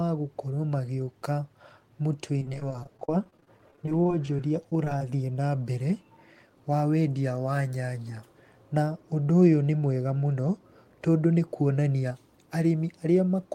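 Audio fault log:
2.39–5.02 s, repeated packet loss (robotic sound): choppy stretch before "na mbere", as 39 gaps up to 30 ms each get patched by extending prior sound.
11.39–12.11 s, jitter buffer speed-up: after "nĩ mwega mũno tondũ" the speech hurries about 5% at unchanged pitch, roughly 50 ms trimmed to shrink an overfull buffer.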